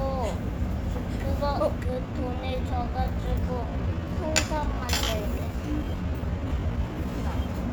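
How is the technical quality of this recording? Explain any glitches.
A time-stretched section disrupts the recording. From 1.82 s to 7.30 s the sound slows to about 0.71 times its original pace while its pitch holds steady. The likely cause is software lengthening this span by repeating short slices, which makes it drag. A spectrogram would show blurred, doubled onsets with unchanged frequency bands, and the waveform would show stretched, repetitive envelopes.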